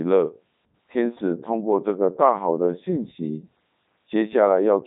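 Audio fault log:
throughout, Codec 2 vocoder: the speech has the robotic, buzzy character of a parametric vocoder, which fits Codec 2 at its 3.2 kbit/s mode. The waveform is not kept; the decoder rebuilds each frame from a pitch value, voicing decisions, energy and a coarse spectral envelope, summing sine waves at pitch harmonics. The heavy damage is heard as smeared, synthetic-sounding speech, and the bandwidth stops at about 3.8 kHz.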